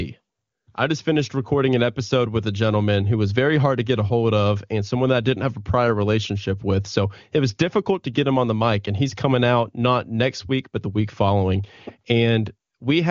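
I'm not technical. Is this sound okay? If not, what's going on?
Yes, the speech comes through as you would expect from an HD Voice (AMR wideband) phone call, whose sound naturally stops at about 7 kHz, and nothing in the signal points to a technical problem.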